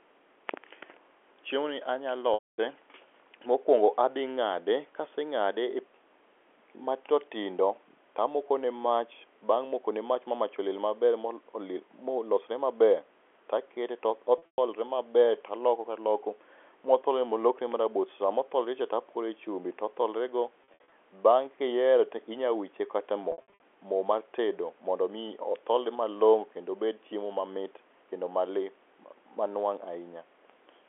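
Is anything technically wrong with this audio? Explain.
Yes. There is packet loss with pitch repetition at 2.34–2.58 s, 14.38–14.58 s after "to akete to", 20.64–20.92 s after "chumbi otholrego", and 23.32–23.60 s before "mo mar tedo mondo". The speech briefly freezes into a held, buzzy tone, then fades toward silence before it returns. This happens because the receiver loops the last pitch period to cover missing audio: about 240 ms continuously in the first gap, and 160–200 ms scattered across brief runs in the later three.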